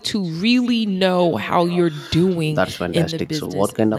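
Echo with no canceller runs through the whole speech clip. At the far end the call plays from a loudspeaker, the microphone there picks it up again, and nothing strips that pickup out before it returns. Each phrase is therefore trailed by a faint copy about a fifth of a second later, around 24 dB below the direct sound, and thinner.

One channel drops out from 3.04 s to the end at 3.98 s. The sound falls abruptly by about 6 dB and stays there, which is what happens when a stereo pair is summed to mono and one side goes silent: material shared by both channels loses half its contribution, and anything carried only by the missing side vanishes. The likely cause is that one channel of the stereo feed was lost for that stretch.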